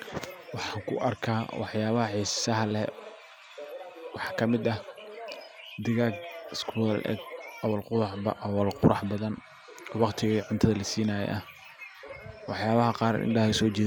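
No technical faults are audible.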